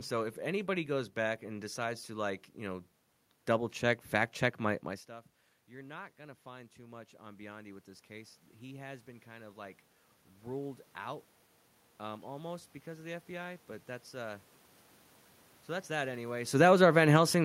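Just after "check my my stuff", around 5 s, the talker moves away and the level drops by about 20 dB. From 5.7 s to 14.51 s, automatic gain rising follows: the control slowly adds about 11 dB to make up for it. Unlike the talker simply returning, the room noise swells along with the voice over these nine seconds. That shared, gradual lift shows the gain stage at work rather than the source.

From 16.46 s to the end, after "so that's that anyway", the talker moves. Automatic gain falling then sets in: the control sees the signal as too loud, or its background noise as too strong, and pulls its gain down. The sound sinks in level, and the background sinks with it. A talker backing off would lower only the voice, so the fading room noise marks this as the gain control responding.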